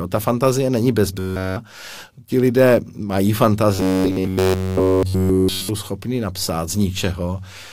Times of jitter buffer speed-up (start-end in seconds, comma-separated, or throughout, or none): none